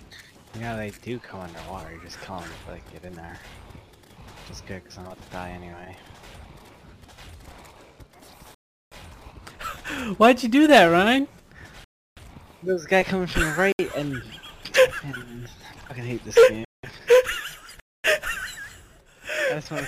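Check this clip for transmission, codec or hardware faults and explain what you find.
Five blocks of digital silence break up the audio, at 8.55–8.92 s, 11.84–12.17 s, 13.72–13.79 s, 16.65–16.83 s and 17.80–18.04 s, lasting from about 70 ms to 370 ms.

The output buffer was likely not filled in time, so whole blocks went out as zeros. The first and fourth gaps fit blocks of 16384 and 8192 samples at 44.1 kHz. Each gap is heard as an abrupt hole. The waveform shows a near-flat line, and the spectrogram shows blank vertical bands.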